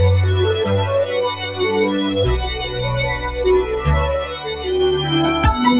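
From the start, the music pumps and thins: attacks come through, but held tones and decaying tails keep sinking, with the level swinging by around 10 dB. A noise suppressor applied to music, designed for speech, is mistaking steady musical energy for background noise.

The sound is cut by the noise suppressor hardest at 1.35 to 1.6 s (down about 7 dB), 2.58 to 2.79 s (about 6 dB), 3.14 to 3.39 s (about 6 dB) and 4.24 to 4.67 s (about 7 dB). Sustained passages dip and their decays are clipped short. The band-limited tone, with nothing above 4 kHz, points to a G.711 A-law call path at 64 kbps.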